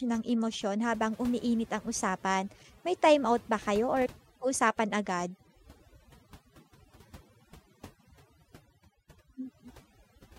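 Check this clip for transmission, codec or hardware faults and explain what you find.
Two faults are present. Throughout the speech, the background sinks to near silence dotted with twinkling specks. This is overdone noise removal: a denoiser set too strongly pushed individual frequency bands down whenever they resembled its noise estimate, taking quiet parts of the voice with them.

At 0.39 s a single sharp click sounds, seen as a thin vertical line across the spectrum. It is likely dropped samples: roughly two samples, a tiny fraction of a millisecond, went missing, so the waveform jumps abruptly without losing any audible sound.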